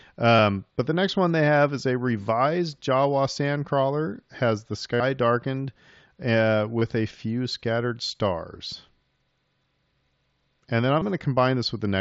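Concealed Bluetooth headset packet loss at 0.37–0.39 s before "but the next one", 4.94–5.00 s after "has the", 6.79–6.82 s, and 10.99–11.02 s. Lost packets are patched with repeated recent waveform. The 60 ms gap sounds briefly buzzy and warbles as real audio resumes.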